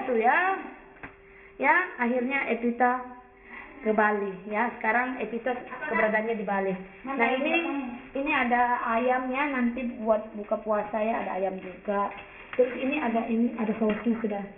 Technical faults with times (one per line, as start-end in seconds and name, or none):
0.00-14.57 aliasing